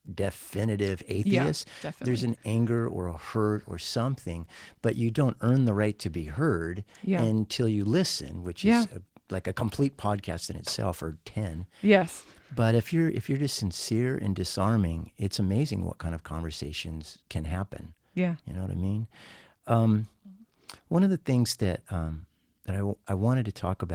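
No technical faults can be heard anywhere in the speech.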